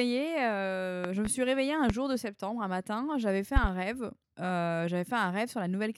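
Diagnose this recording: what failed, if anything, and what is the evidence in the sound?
Loud pops in the analogue wiring: a double pop at 1.04–1.29 s, one at 1.90–1.93 s, another pair at 3.56–3.67 s, about 15–20 dB over the speech, likely voltage spikes.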